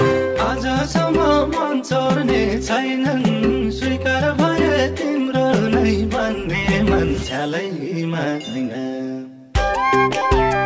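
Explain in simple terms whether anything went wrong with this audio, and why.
Nothing went wrong: the audio came through a normal internet-call connection, which keeps only the sound below about 8 kHz.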